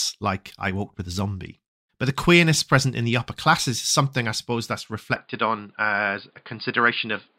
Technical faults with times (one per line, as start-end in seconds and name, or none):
5.16-7.38 input switched to a poorer device